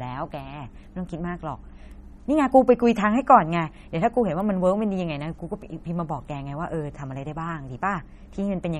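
From start to end the speech carries plainly audible damage of the kind left by MP3 compression at a low bitrate, most likely around 32 kbps. Nothing is present above 13.9 kHz, where the encoder sheds the top band, and weak frequency detail flickers in and out between frames, giving a watery, swirling texture. A spectrogram shows a hard ceiling at 13.9 kHz and patchy, blocky gaps in the quieter parts of the spectrum.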